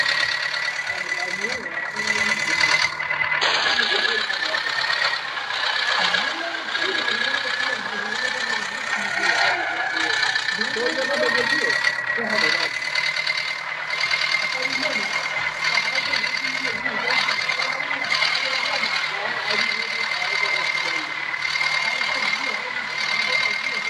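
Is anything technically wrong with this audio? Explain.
No, nothing technically wrong stood out on listening to this audio.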